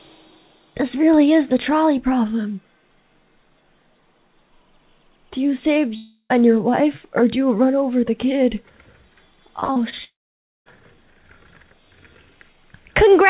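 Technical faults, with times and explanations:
5.96–6.32 s, long network dropout: about 0.34 s of audio likely never reached the receiver, which extended the last sound to cover the hole. This is heard as a buzzy continuation fading into roughly 90 ms of silence before the sound resumes with that section missing.
9.60–9.94 s, repeated packet loss (robotic sound): four separate gaps, the longest 44 ms, were each patched by repeating the preceding sound, so about 37% of this stretch is synthetic fill. The rapid alternation of real and patched audio gives a choppy texture with pieces missing.
10.04–10.68 s, long network dropout: a longer hole of about 0.62 s follows shortly after the choppy stretch. The concealment buzz dies out quickly and leaves about 0.55 s of silence, so the audio jumps forward when it returns, with that portion lost. The narrow telephone-band sound of the G.711 call path, with nothing above 4 kHz, stays the same around both gaps.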